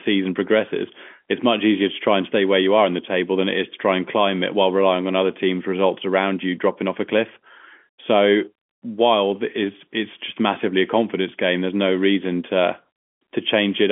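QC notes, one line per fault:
Nothing stood out on listening to this telephone-band speech, which is limited to roughly 200 Hz to 3.4 kHz as G.711 coding gives it.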